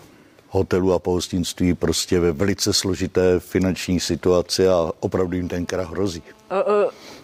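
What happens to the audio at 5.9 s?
A hard, raspy buzz at about 217 Hz, rich in harmonics, sits steadily under the speech from 5.20 s to 7.19 s, about 32 dB below it. This is GSM phone buzz: a nearby 2G phone on a call transmits bursts that the audio circuitry rectifies.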